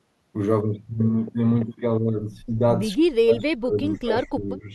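A speech clip where the level dips slightly at 2.9 to 2.97 s, then drops hard and in pieces from 3.22 to 4.65 s, by roughly 25 dB at worst. It's likely speech suppressed in double talk, with the echo canceller muting the near talker during overlap.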